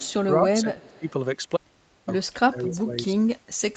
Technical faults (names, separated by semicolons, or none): echo leak; speech suppressed in double talk